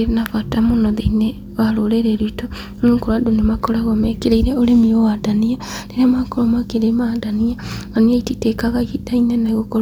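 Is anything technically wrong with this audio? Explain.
No technical faults are audible.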